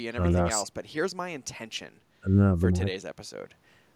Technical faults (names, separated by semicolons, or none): none